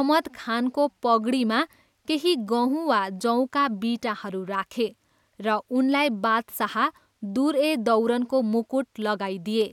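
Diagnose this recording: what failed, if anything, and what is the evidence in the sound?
Nothing in this speech recording stood out as a fault on listening.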